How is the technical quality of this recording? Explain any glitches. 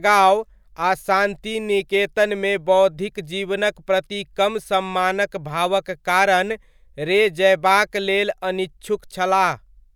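No technical problems can be heard in this recording.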